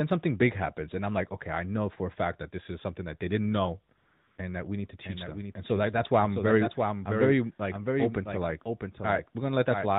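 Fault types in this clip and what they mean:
AMR comfort noise: for 400 ms from 3.98 s, real background gives way to steady, smooth synthetic hiss. Unlike a dropout, the gap is filled rather than silent.
doubled audio track: from 5.04 s to the end, a dry copy trails roughly 0.7 s behind, a few dB quieter, likely from a slower second path. Unlike echo, it has no decay.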